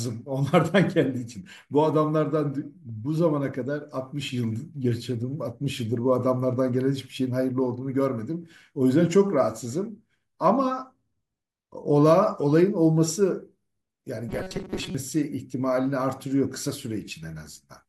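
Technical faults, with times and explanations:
14.29 to 14.95 s, robotic sound from repeated short buffers: for about two-thirds of a second the speech turns into a rigid, metallic buzz fixed at 188 Hz that still loosely tracks the syllables. The likely cause is audio arriving too slowly, so playback loops a chunk of roughly 5.3 ms (one cycle of 188 Hz) and about half the real signal is skipped. Unlike a stutter or dropout, the sound never stops.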